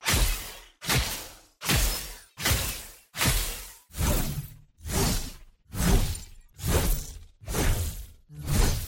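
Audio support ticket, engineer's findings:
Block of digital silence at 5.79 s. Heard as a single tick, not a hole. Gap about 2.18 ms. Samples drop out and return with no fade. Hard edges give the click. Probable component: output buffer not filled in time. Check audio callback timing and underrun handling.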